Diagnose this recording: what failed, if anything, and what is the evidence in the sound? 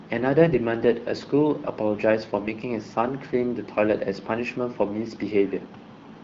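AMR bit errors at 0.54–0.58 s and 2.38–2.50 s, from a weak network link. The speech keeps its pitch and level but turns hoarse and gargly. A few percent of the weakly protected bits flipped, which misplaces the excitation pulses and skews the pitch, gain and spectral values.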